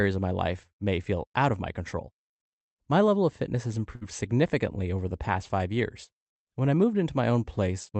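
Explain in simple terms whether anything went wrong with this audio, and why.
Between about 3.95 and 4.03 s there is a burst of packet loss: a short run of the call's audio never arrived in time. The receiver covers the hole by stretching the last bit of speech for about 57 ms and fading it out, then jumps ahead, so about 60 ms of speech is simply skipped. Unlike a plain dropout, the gap isn't silent. You hear a brief held buzz or hiss, then the speech resumes slightly further on.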